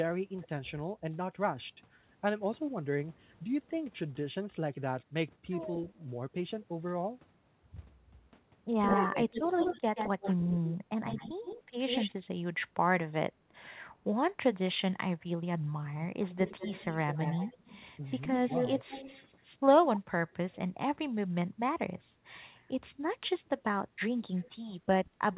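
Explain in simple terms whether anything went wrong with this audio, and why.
Echo leak at 5.89–6.04, 8.82–13.63, 16.29–20.36 and 24.36–25.35 s: a delayed copy of the speech returns, faint at first and at the end, strongest at 8.82–13.63 s. This is likely a far-end loudspeaker's sound getting past the echo canceller.

Speech suppressed in double talk at 8.97–9.31, 10.99–11.26 and 25.10–25.16 s: the speech briefly dips. The likely cause is the canceller turning everything down because it confused speech with echo.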